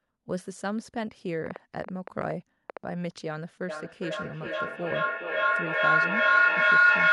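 From 1.46 to 2.78 s there's a train of clicks, roughly ten of them at about 6.9 per second but unevenly spaced, poking up to around 15 dB above the speech. That's likely interference from nearby gear or a faulty connection injecting repeated pulses. Then at 3.69 s a feedback howl takes over and runs to the end. A mic-to-speaker loop is gaining level each trip, with repeats roughly every 400 ms, narrowing onto a tone near 1.5 kHz that peaks about 12 dB over the speech.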